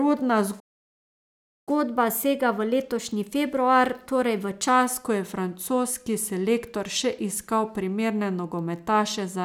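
A playback stall from 0.59 to 1.69 s cuts this speech clip off mid-flow for about 1.07 s of silence. The likely cause is the player running out of buffered data or having its output thread blocked. The speech then resumes where it broke off, with "ko je". Catch-up at higher speed follows from 1.69 to 4.69 s. The player works through its backlog by resampling at 1.1 times normal speed, so the speech sounds hurried and raised by roughly a semitone and a half. It then settles back to normal speed and pitch.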